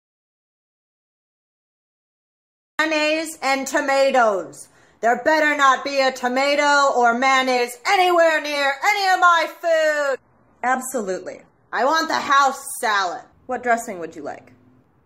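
The audio opens already in an audio dropout to silence that lasts until 2.79 s. For those first 2.79 s there is nothing at all, not even room tone, and sound begins abruptly mid-flow. The likely cause is an input that was lost, through a disconnected device, failed link or stray mute, while the recorder kept writing silence. On a waveform this is a flat line, and a spectrogram shows solid black across every frequency until the sudden onset.

From 9.84 s to 11.84 s the stream switches to a lower-bitrate version with no gap. The treble thins as codec artefacts rise, then full brightness snaps back after two seconds. The sound points to a drop from around 96 kbit/s to below 40 kbit/s in AAC, as on an adaptive stream riding out a slow connection. A spectrogram shows a hard ceiling at 12.5 kHz across that window, with patchy, smeared high bands beneath it.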